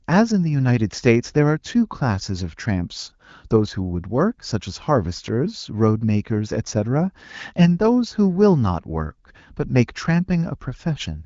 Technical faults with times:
none

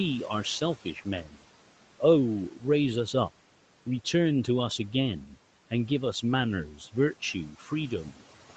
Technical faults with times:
1.24-1.41 speech cut by the noise suppressor
7.59-7.68 speech cut by the noise suppressor

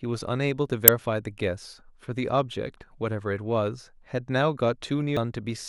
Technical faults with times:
0.88 damaged data in a compressed stream
5.17 damaged data in a compressed stream

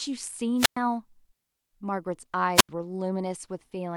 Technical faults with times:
0.57-0.78 wireless microphone squelch dropout
2.54-2.69 wireless microphone squelch dropout

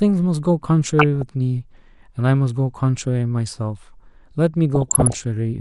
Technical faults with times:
0.00-5.60 MP2 compression
0.89-1.29 DAB burbling
4.75-5.19 DAB burbling

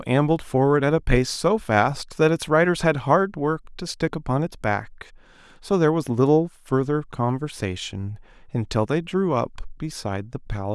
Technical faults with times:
none

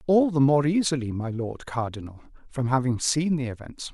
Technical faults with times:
none

